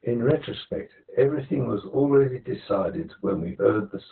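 From the start, heavy Opus voice compression muffles and roughens the speech. Nothing sits above 4.2 kHz, which fits narrowband SILK coding at a very low bitrate. The spectrogram shows an empty top. From 0.31 s to the end, channel delay causes comb filtering: one channel lags by roughly 10 ms, and summing to mono cuts evenly spaced notches from about 50 Hz upward. This leaves a hollow sound and thin dark horizontal stripes.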